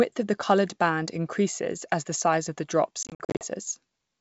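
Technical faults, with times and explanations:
3.03–3.46 s, packet loss on an ADPCM call: just after "size of the drops", the speech breaks into a string of abrupt silent holes, about 230 ms missing across 380 ms, none longer than 50 ms, which fits roughly twenty small packets. After each gap the speech returns briefly rough and slightly distorted, because the G.722 decoder's adaptive predictor and step size lost track of the sender's state during the dropout and need some tens of milliseconds to resynchronise.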